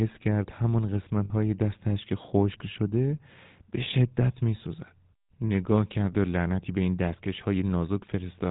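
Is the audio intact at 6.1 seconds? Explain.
No. From 6.12 to 6.14 s there are lost GSM frames: a gap that fits a single dropped 20 ms frame was filled by repeating the last good frame's parameters. That brief stretch of speech comes out as a short, rough, metallic ring.

The GSM full-rate codec also affects the whole passage, including this moment. It rebuilds speech from a vocal-tract model driven by sparse, regular pulses, which fits the 13 kbps full-rate mode. Nothing above 4 kHz comes through, and a plainly audible buzzy, gravelly roughness remains.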